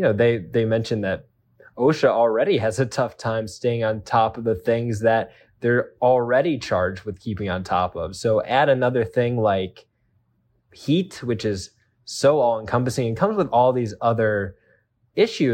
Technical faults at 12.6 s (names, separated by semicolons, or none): none